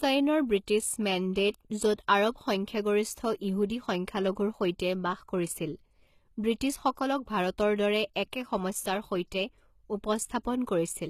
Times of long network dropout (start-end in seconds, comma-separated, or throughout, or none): none